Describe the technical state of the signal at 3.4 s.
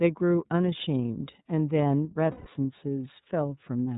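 At 3.4 s the speech is still carrying iLBC codec damage, which runs through the whole clip. Nothing above 4 kHz survives, so the sound is narrowband and dull at the top, and the codec's frame-by-frame excitation coding, with each frame handled independently of the last, leaves a plainly audible rough, slightly synthetic texture. The character fits 30 ms frames at around 13 kbps, the lower-rate iLBC mode.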